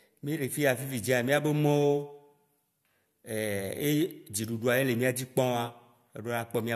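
No audible technical faults at any point in the speech recording.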